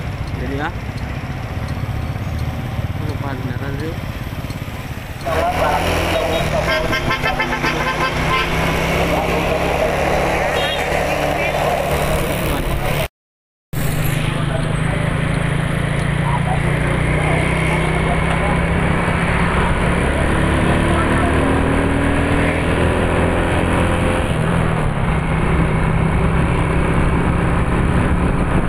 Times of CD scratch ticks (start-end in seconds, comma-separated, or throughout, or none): 14.63-16.27